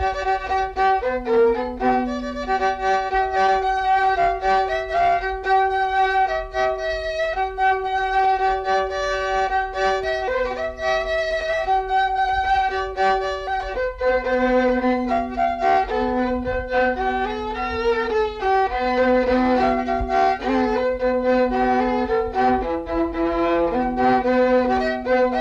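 No technical faults are audible.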